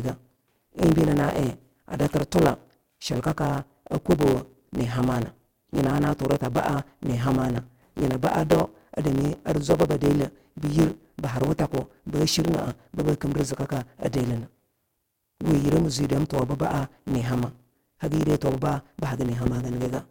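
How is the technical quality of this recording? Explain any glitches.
The recording has two problems: a constant buzz with sped-up speech from start to finish, and two loud pops near the middle and end.

The block size mismatch (truncated) runs throughout. One stage hands over longer chunks than the next one reads, so the tail of each chunk gets dropped. You hear a 100 Hz buzz at that block rate, and the speech runs about 1.09 times fast while keeping roughly its normal pitch.

There are two loud pops, at 7.58 to 7.60 s and 19.46 to 19.49 s. Each is a single sharp click, around 10 dB above the speech for the first and about 15 dB for the second, and the talking carries on underneath. They're likely from a voltage spike such as a plug, switch, static or driver glitch.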